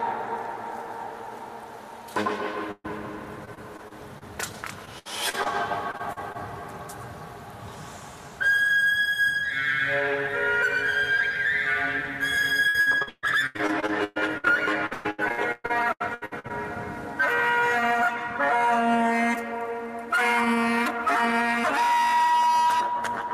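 At 2.71 s the sound stalls into a held, fading tone for about 127 ms, drops briefly to near-silence, and picks up again by 3.01 s with roughly 120 ms of material gone. This is a burst of packet loss: several consecutive packets never arrived in time. The receiver stretched the last good sound across the hole and faded it, then resumed at a later point.

Choppy stretches follow from 3.45 to 4.23 s, 4.85 to 5.47 s and 5.91 to 6.36 s. They return more heavily from 12.68 to 14.48 s and 14.86 to 16.51 s, where gaps of up to about 140 ms cover over a third to nearly half the span. This is repeated packet loss with a robotic sound. Short losses kept recurring, each patched by extending the previous sound. The rapid alternation of real and synthesised fragments produces the robotic, stuttering texture.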